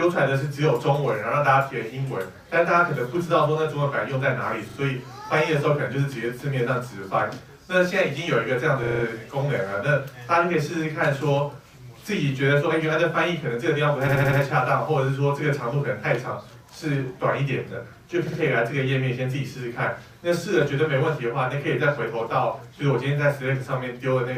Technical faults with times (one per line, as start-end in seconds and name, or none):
4.69-4.77 repeated frames
8.83-9.04 repeated frames
14.07-14.39 repeated frames
18.27-18.39 repeated frames